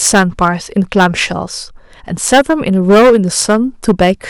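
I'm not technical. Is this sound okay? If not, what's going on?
No. The speech has hard clipping from start to finish. The signal was pushed far louder than the recording stage could handle, so its loudest peaks were sliced flat. Only about one moment in twenty is cut, but every loud syllable turns rough and buzzy.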